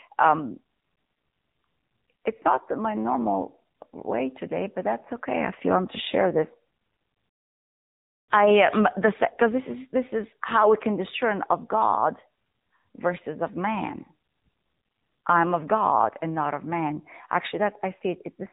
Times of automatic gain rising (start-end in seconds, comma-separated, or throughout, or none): none